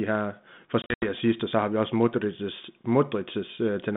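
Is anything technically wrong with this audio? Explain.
Yes. Between 0.82 and 1.10 s the speech breaks into hard-edged silent gaps, about 140 ms missing across a 200 ms stretch, the longest gap 80 ms. Each return is slightly distorted before it settles. This is packet loss on an ADPCM call. The pattern points to something like seven lost packets. The dropouts knock the G.726 decoder's adaptive predictor and step size out of step with the sender's, so recovery is rough.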